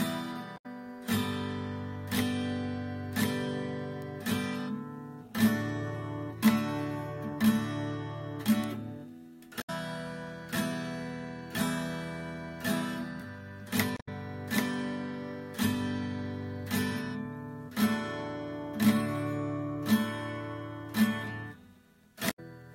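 Short glitches of about 0.12 s at 0.54 s, 9.58 s, 13.96 s and 22.27 s come from damaged data in a compressed stream: corrupted frames make the decoder lose sync and search for the next frame header. Single sharp ticks at 4.02 s and 8.64 s are bit error spikes, each one flipped bit in a single sample.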